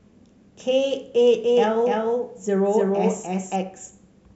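A speech recording with a doubled audio track from 1.44 to 3.56 s: a second full-band copy trails the original by roughly a third of a second at about the same level, with no decay or room colour. It starts and stops abruptly, likely from a slower second capture path. On a waveform and spectrogram, each syllable's pattern repeats as a shifted duplicate.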